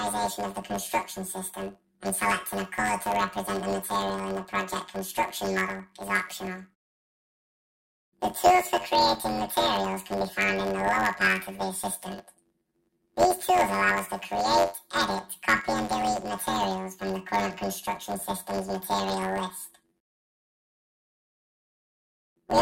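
Throughout the clip, planar audio is read as interleaved. Each 10.88 ms block stores left samples, then right, but is played as alternating pairs. Every block replays twice at double speed. At these short blocks, the sound becomes a robotic buzz near 92 Hz, without a clear octave shift.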